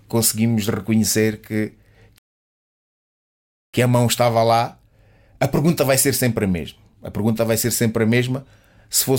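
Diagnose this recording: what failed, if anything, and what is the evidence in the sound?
A playback stall hits the speech at 2.18 s, right after "conseguimos reconhecer que". Output goes silent for 1.55 s. It resumes at 3.74 s with "a mão estava lá". The player likely ran out of buffered data or its thread was blocked.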